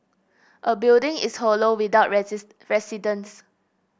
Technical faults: none

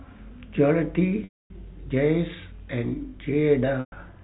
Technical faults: packet loss with pitch repetition

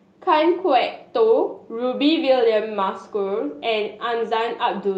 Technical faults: none

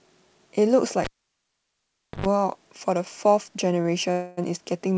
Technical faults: cable pulled and plugged in; short stall from a late packet; call audio freeze

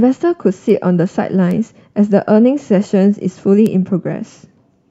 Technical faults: bit error spike

